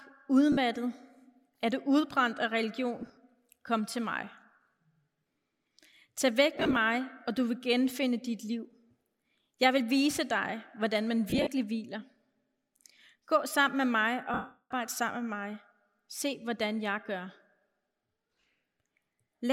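Lost LE Audio frames, with the LC3 decoder filling each gap by repeating the last spectrum with scrambled phase, blur the speech into a noisy smear at 0.52 to 0.57 s, at 3.02 to 3.17 s after "du udbrændt af", at 6.55 to 6.77 s before "og du vil genfinde", and at 11.30 to 11.48 s after "vise dig hvordan man". The middle three are scattered short dropouts. At 14.34 to 14.71 s an unbroken loss of about 0.37 s fades gradually toward silence.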